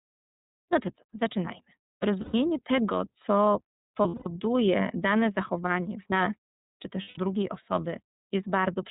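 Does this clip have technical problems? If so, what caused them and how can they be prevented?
Yes. The speech runs through the iLBC codec for all of its length: nothing above 4 kHz survives, and the voice has a rough, slightly synthetic edge, which fits iLBC's 13.33 kbps mode with 30 ms frames. That synthetic grain is what tells it apart from a simple low-pass filter. A wideband codec or a higher-bitrate path would prevent it.

Lost iLBC frames occur at 0.49 to 0.59 s, at 2.21 to 2.35 s just before "tego co", at 4.02 to 4.27 s just after "tego co", and at 7.02 to 7.18 s just after "w nas czy też". At each one the decoder fills the gap by repeating the last pitch cycle with added noise, so you hear a held, buzzy vowel rather than silence. The first event hides about 270 ms of missing audio, which fits roughly nine lost 30 ms frames. The voice is right again almost at once, because each iLBC frame decodes on its own, and that quick recovery separates this from loss in codecs that depend on the previous frame. 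A more reliable network path, or forward error correction, would prevent the losses.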